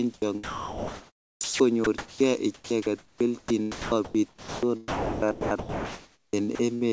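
Speech, band-limited to 8 kHz by the call codec. Sound chopped by the voice detector runs from 0.14 to 2.20 s, 2.54 to 4.63 s, and 4.88 to 6.83 s. In each stretch, over a second of sound becomes synthetic comfort noise. A voice detector likely toggled repeatedly. There is a clipped start after a pause at 1.33 s. After a 0.3 s silence, about 80 ms of onset is swallowed while the output device wakes.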